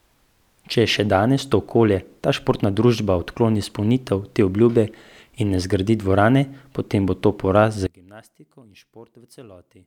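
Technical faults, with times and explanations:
7.87 to 9.87 s, one channel inverted: the likely cause is that one side of the stereo pair had its polarity flipped, so when the two channels are summed to mono the speech they share cancels instead of adding. The level falls by about 26 dB and the centred speech nearly vanishes, leaving only a faint trace made of whatever differs between the channels, and this lasts to the end of the clip.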